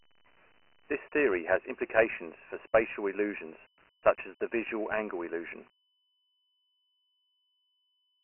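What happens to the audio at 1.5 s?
At 1.5 s you're hearing Dialogic VOX ADPCM, which runs through the whole clip. The speech is squeezed into a phone-style band with nothing above 3 kHz, which fits 4-bit samples at 6,000 a second, and the heavy coding leaves a gritty hiss trailing the speech.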